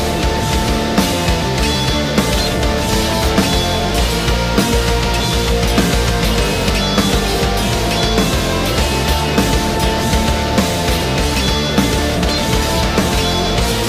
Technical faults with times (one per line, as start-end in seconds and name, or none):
none